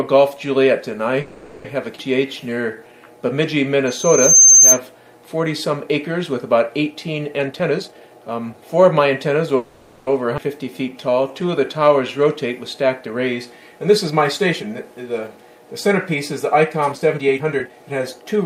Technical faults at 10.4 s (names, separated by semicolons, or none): skip ahead